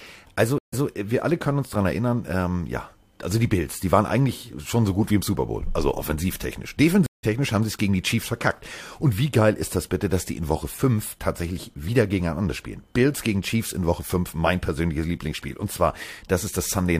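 Two stream reconnects break this speech. At 0.58 s the connection drops and the audio goes silent for 142 ms. A new decoder then starts mid-stream. Playback resumes 139 ms earlier, so a short stretch repeats before "äh wir alle können". At 7.06 s, after "also offensivtechnisch", it happens again. This gap lasts 167 ms. The stream picks up roughly 0.15 s later, skipping a little audio before "haben sie es gegen".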